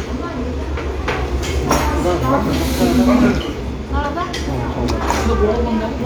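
Damaged data in a compressed stream strikes this sound recording twice, from 1.21 to 1.27 s and again from 4.00 to 4.05 s. At each spot some of the encoded bytes were lost or corrupted, so the decoder could not read those frames correctly and had to resynchronise on a later frame header. What reaches the ear is a brief, unnatural chirp or blip of about 50 ms breaking into the sound at both times.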